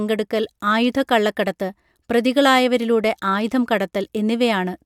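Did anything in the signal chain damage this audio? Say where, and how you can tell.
No, nothing along the way seems to have harmed this speech recording, and there's no sign of damage from any stage of the chain.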